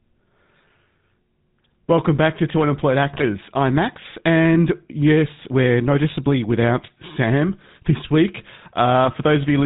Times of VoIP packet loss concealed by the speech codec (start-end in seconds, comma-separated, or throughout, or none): none